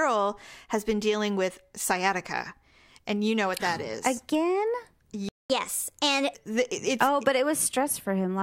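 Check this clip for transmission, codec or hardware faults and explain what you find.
Two related playback faults affect this speech clip, both near the 5-second mark.

A playback stall runs from 5.29 to 5.50 s. The player likely ran short of buffered data, so the speech cuts to silence for about 0.21 s mid-flow.

Catch-up at higher speed follows from 5.50 to 6.35 s. The player resamples its backlog at 1.25 times normal rate, so the speech rushes and rises roughly four semitones on "it's oh but".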